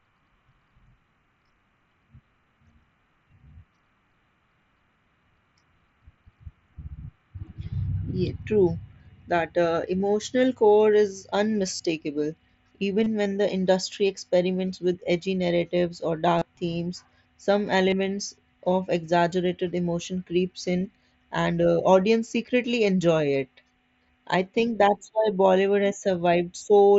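Speech over a Bluetooth mSBC headset link, with concealed Bluetooth headset packet loss at 9.98–10.00 s, 11.76–11.80 s, 13.04–13.06 s (before "when the industry experiments"), 16.38–16.42 s (between "with edgy narratives or" and "themes some") and 17.90–17.92 s. Each lasts about 20 to 40 ms. Unlike a dropout, there is no silence. The receiver fills the missing packets by repeating a recent stretch of waveform, giving a brief buzzy hold with a faint warble as real audio returns.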